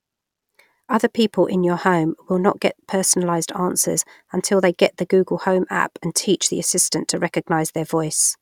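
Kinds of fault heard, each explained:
No technical faults can be heard anywhere in the recording, and the signal holds steady throughout.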